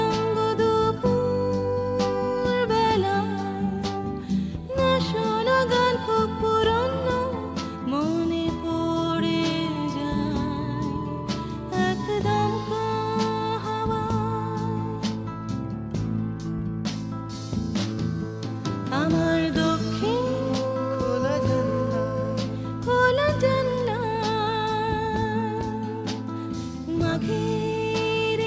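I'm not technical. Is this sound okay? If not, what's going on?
Yes, nothing stood out on listening; it sounds like ordinary audio that went through a call's microphone processing, which trims the very deepest bass and the highest treble as a normal part of how calls work.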